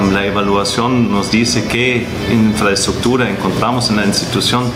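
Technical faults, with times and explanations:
Throughout, gain pumping. The level swings by around 10 dB as loud parts arrive and pass. Loud and quiet passages end up closer in level, so the audio sounds squashed. Likely cause: input gain set too high, with a fast limiter or compressor pulling it down.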